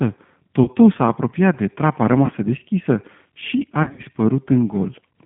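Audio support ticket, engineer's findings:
G.729 codec, whole clip. Speech band-limited to roughly 150 Hz to 3.5 kHz, nothing on top. Rough, slightly synthetic texture, plainly audible. Mechanism: 8 kbit/s analysis-by-synthesis coding, likely the G.729A variant. Voice rebuilt from a vocal-tract filter, pitch predictor and a sparse pulse excitation per subframe, so fine detail is discarded. Component: codec on the VoIP leg.

VoIP packet loss concealed by the speech codec, 0.64–0.67 s and 2.26–2.31 s. Brief buzzy or noisy smear, then weak recovery. Each fits one lost 20 ms packet. Mechanism: decoder repeats last pitch and filter at falling gain, and the next frames inherit the error.

Same fault, 3.83–4.03 s. Broken, fading buzz or noise scattered over about 160 ms, longest gap about 60 ms. Points to several packets lost in a burst. Probable component: network path or jitter buffer.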